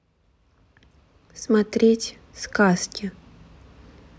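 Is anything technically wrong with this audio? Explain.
No, nothing technically wrong can be heard in this speech recording. There is no fault here to point to or explain.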